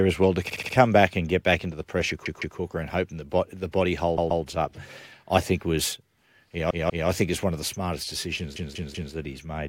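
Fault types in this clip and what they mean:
Repeated frames: A short block of the coded stream plays again, so the speech stutters. This happens at 0.50, 2.26, 4.18, 6.70 and 8.56 s. Each block lasts 64 to 192 ms and repeats two to four extra times, adding 0.26 to 0.58 s.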